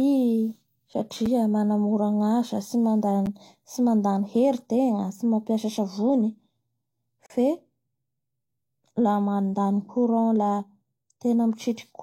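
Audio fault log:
1.26 s, 3.26 s and 7.26–7.30 s, gap between stream segments: the timestamps of adjacent 2.0 s segments fail to meet, and the player fills each gap with digital silence. The speech drops out abruptly with hard edges, for 5.6 ms, 8.5 ms and then 38.5 ms. The holes fall on segment boundaries two seconds apart. Nothing is lost from the speech, which resumes exactly where it stopped, only slightly later.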